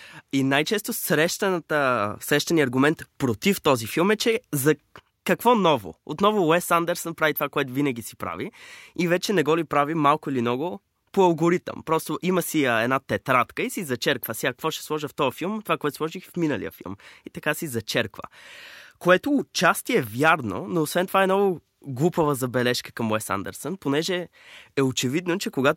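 Nothing in the recording stands out as a technical fault at any point, so there's no problem moment to describe.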